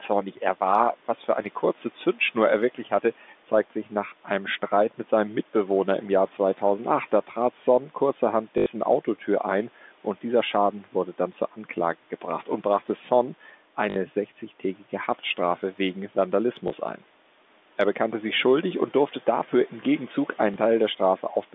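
A noise suppressor misread part of this speech clip as background noise and pulled it down by up to about 11 dB between 2.75 and 3.04 s, just before "zeigt sich nach einem". About a tenth of a second of sound comes out swallowed and faint. Packet loss with the last packet repeated follows. The receiver replayed the previous packet in place of missing audio at 8.58 s (80 ms), 13.9 s (60 ms), 16.68 s (20 ms) and 20.54 s (20 ms), which fits 20 ms packets. The longer two stutter with a robotic 50 Hz buzz, all within a narrow telephone band over room noise about 27 dB down.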